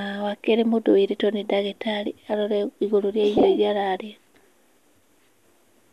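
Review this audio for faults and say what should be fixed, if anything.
Two spots have frames out of order: 3.38 to 3.43 s, and 4.63 to 4.74 s. Neighbouring chunks got decoded swapped, so each stretch plays with its halves exchanged. You hear a garbled flutter, but no time is lost. The first fits single swapped frames of about 26 ms, the second pairs of about 52 ms. To prevent it, reorder packets by sequence number in the jitter buffer before decoding.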